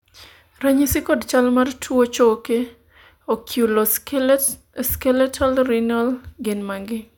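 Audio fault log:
No faults detected in this speech recording.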